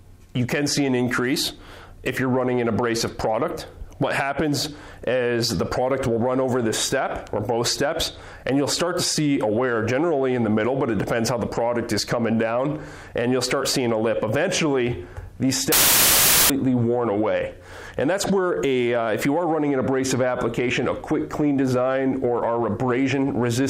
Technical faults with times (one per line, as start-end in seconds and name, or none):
15.72-16.50 samples built from the wrong bytes